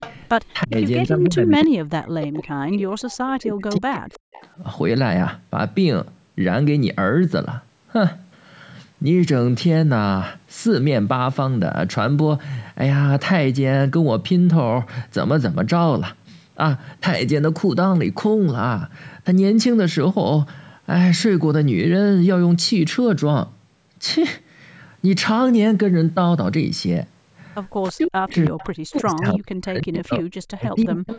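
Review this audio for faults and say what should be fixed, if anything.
Echo leak: the far end's echo canceller most likely let part of its loudspeaker output reach its microphone and sent it back. The result is a faint copy of the speech arriving 324 ms late, about 15 to 30 dB below the direct sound, at 0.00–0.14 s, 0.87–1.66 s, 3.12–3.17 s, 4.14–4.48 s, 28.45–28.66 s and 30.81 s to the end. Preventing this means giving the canceller a better-converged echo path model or using a headset so the loudspeaker output never reaches the microphone.

Speech suppressed in double talk: when both sides spoke at once, the echo canceller likely could not separate its own talker from the returning echo and attenuated everything. Between 0.64 and 4.59 s, and again from 27.88 s to the end, around three seconds of each stretch dips and falls by as much as about 40 dB at the deepest point. The band-limited top end, with nothing above 8 kHz, comes from the call's normal microphone processing. 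Preventing this means tuning the double-talk detector so that it favours near-end speech over aggressive suppression.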